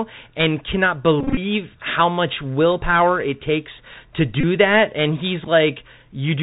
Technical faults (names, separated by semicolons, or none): Bluetooth CVSD headset codec; Bluetooth headset packet repeated